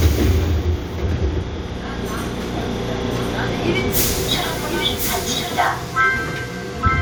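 From 2.54 s to 5.68 s, a doubled audio track appears. A dry copy trails about one second behind, roughly 5 dB quieter, starting and stopping abruptly. A second, slower capture path is likely.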